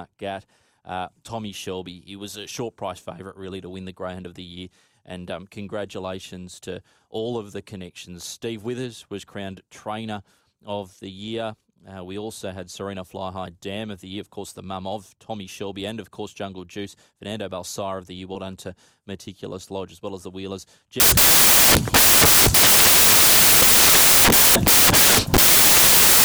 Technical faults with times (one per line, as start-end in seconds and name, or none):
21.00-26.25 samples built from the wrong bytes